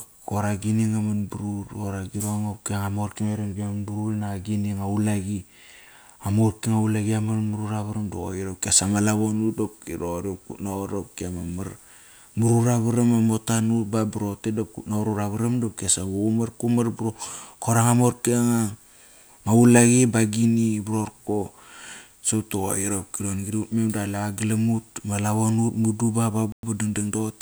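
At 26.52 s the speech drops to silence for about 110 ms, then resumes at 26.63 s where it left off. This is a Bluetooth stall, likely from interference delaying packets until the headphones' buffer emptied and playback paused awaiting retransmission.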